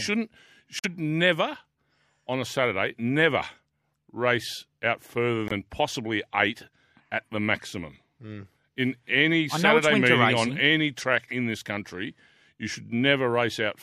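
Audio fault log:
0.79–0.86 s, corrupt frame muted. The speech drops to silence abruptly for about 64 ms. The cut fits two compressed frames being rejected by the decoder and replaced with silence.
5.48–5.52 s, corrupt frame muted. A 37 ms hole opens between "race out further" and "possibly eight at the". Its length again points to two damaged frames being discarded. Timing stays intact around both gaps, so the speech simply resumes on schedule.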